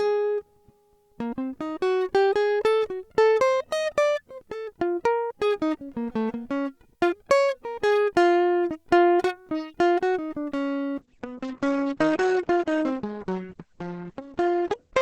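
At 10.99 s a call bitrate drop sets in and lasts to the end of the music at 15.01 s. The bandwidth estimate collapsed and the encoder was forced onto a much smaller bit budget, which fits a fall from around 64 kbps to about 10 kbps. The audio bandwidth narrows from 20 kHz to 8 kHz, so the top end goes dull and muffled, while the coarser coding leaves the remaining sound rough and watery for the final four seconds.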